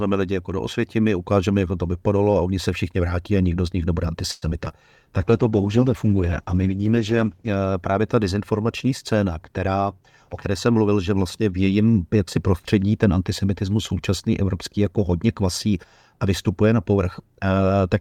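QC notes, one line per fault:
4.31–4.72 s, repeated packet loss (robotic sound): the speech turns choppy and robotic, with small pieces dropping out. Four packet gaps fall in under half a second, the longest about 106 ms. Each hole is bridged by stretching the last bit of sound, and about a third of the stretch is concealed this way. The next gap arrives before the patched sound has settled, which is what gives it the robotic edge.
5.21–7.57 s, call bitrate drop: the voice goes rough and watery, and the top end is noticeably dulled. The encoder's rate was pulled from 64 kbps down to 15 kbps and stayed at that floor for about 2.3 s. At that rate the codec quantises far more coarsely and gives up the high frequencies. Clarity returns with the words "právě ta dezinformační scéna", once the bitrate has recovered.
9.49–10.02 s and 10.46–10.89 s, jitter buffer speed-up: the speech sounds briefly hurried while its pitch stays the same. 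The first stretch, just after "právě ta dezinformační scéna", runs at about 112% speed, and the second, ending just before "že vlastně v jejím", at about 109%. The receiver had more audio queued than it wanted, so it trimmed short pitch-period slices to reduce the delay, cutting out roughly 70 ms and 50 ms respectively.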